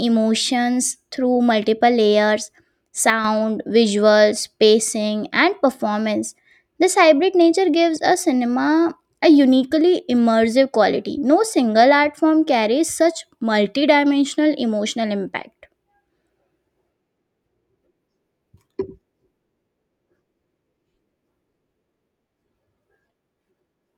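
A digital gain change applied without any ramp, likely a setting or a one-bit shift taking effect between consecutive samples, produces a sudden gain jump in this speech recording at 3.1 s. The level drops by about 6 dB in a single step, and speech and background noise fall together, since the whole signal is scaled at once. The lowered level holds for roughly 145 ms before returning at 3.25 s.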